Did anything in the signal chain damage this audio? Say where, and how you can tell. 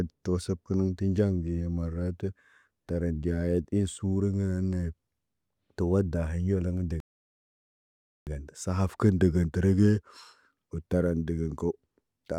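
Yes, at the playback end. The speech just drops out at 7.00 s and stays silent until 8.27 s, a gap of about 1.27 s, then carries on. That's a playback stall. A cut that clean and that long, with nothing smeared or garbled around it, most likely means the player's output buffer ran dry or its audio thread got blocked, so the output sat silent until data started flowing again.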